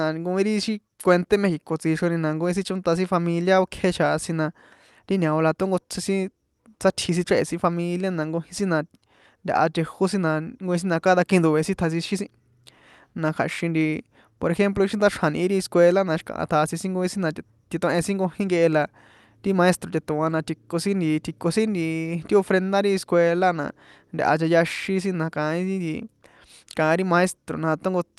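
Clock drift between sender and receiver runs through the whole recording: the sending clock is roughly five percent fast, so the jitter buffer keeps overfilling and the receiver must discard material to keep latency from growing.

Repeated timing corrections follow from this from 0.33 s to 28.12 s, with the delivered speech running at 105 percent speed. Short pieces are cut at irregular intervals, always in the same direction. The Opus call path's coding, with its 12 kHz upper limit, is present throughout.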